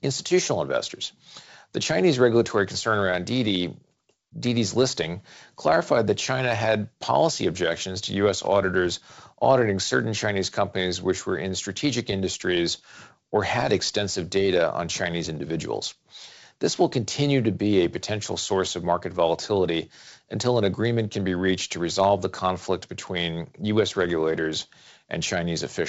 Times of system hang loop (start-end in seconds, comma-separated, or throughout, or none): none